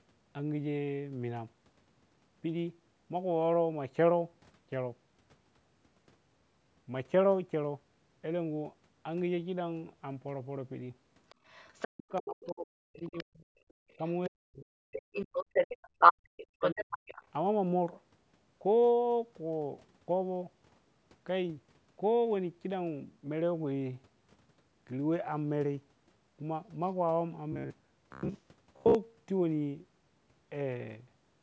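From 11.29 to 12.52 s, and again at 12.97 to 13.24 s, the echo canceller likely failed to strip the loudspeaker's playback from the microphone, so the other side's voice leaks through, about 20 dB below the talker, as a faint second voice. Overlapping this, from 11.91 to 13.5 s, speech is suppressed in double talk: with both sides active, the canceller likely turned everything down, and the talker's voice sinks by as much as about 40 dB in broken patches totalling roughly 1.5 s.

The same pattern recurs. Faint leakage at about 35 dB below speech appears from 13.57 to 14.12 s, and suppression from 13.97 to 15.03 s chops out well over half a second. From 14.92 to 17.24 s the leaked voice is likely louder than the talker, by about 5 dB. Within that stretch, from 15.89 to 16.31 s, the canceller gates the background, pulling room sound down by about 24 dB for a moment before it returns. Another short suppression of the talker follows from 16.59 to 17.03 s.

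From 27.52 to 28.95 s, audio likely arrived too seldom, so the last short buffer was replayed in place of most of the real signal. This is robotic sound from repeated short buffers: a rigid, metallic buzz at 66.8 Hz, which fits a buffer of about 15 ms.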